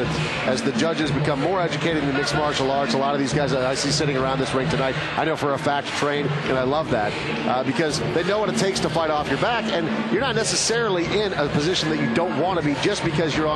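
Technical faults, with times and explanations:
Nothing in the audio stood out as a technical problem on listening.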